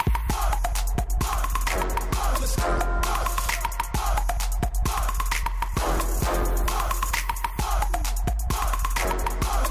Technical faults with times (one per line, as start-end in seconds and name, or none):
none